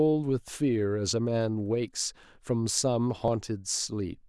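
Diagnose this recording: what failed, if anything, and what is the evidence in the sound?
At 3.28 s the speech jumps forward with no gap. This is likely a dropped buffer (overrun) in the driver. Roughly 20 ms was overwritten before being read.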